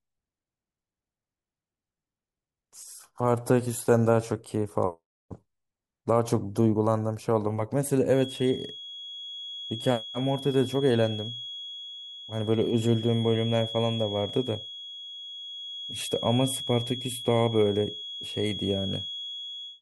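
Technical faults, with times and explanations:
8.08 to 19.82 s, feedback whistle: a thin, steady tone near 3.3 kHz appears behind the speech and continues to the end of the clip, sitting about 15 dB below the signal and swelling and fading slowly in level. The likely cause is the loudspeaker-to-microphone loop running right at its stability limit, so that one frequency keeps recirculating and sustaining itself without building into a runaway howl.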